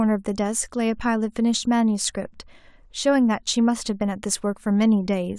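No technical faults can be heard anywhere in the recording, and the signal stays steady and intact throughout.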